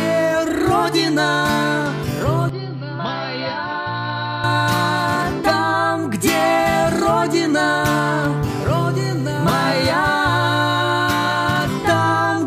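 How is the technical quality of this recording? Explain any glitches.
There's one clear glitch. From 2.49 to 4.44 s the sound abruptly goes duller and a bit quieter, then snaps back, with no gap at either edge. The likely cause is the input switched to a poorer device, such as a second mic or a headset's call mode. That device passes nothing above 5.7 kHz, so the top end vanishes, the level drops by around 5 dB, and a faint new noise floor, well under the signal, comes along with it.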